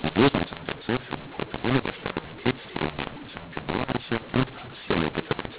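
From start to finish the speech carries a mu-law and A-law mix-up: the G.711 telephone stream was encoded with A-law but decoded as mu-law. Because the two logarithmic curves map the 8-bit codes to different amplitudes, sample levels come out scrambled, some too loud and others too quiet. The quietest codes are lifted well above silence. The result is harsh, gritty distortion over the band-limited, sub-4 kHz telephone sound, with a noise floor filling every pause.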